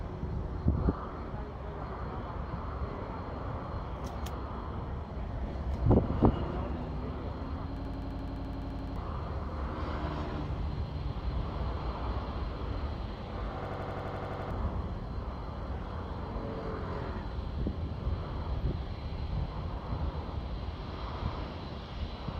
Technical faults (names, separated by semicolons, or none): system hang loop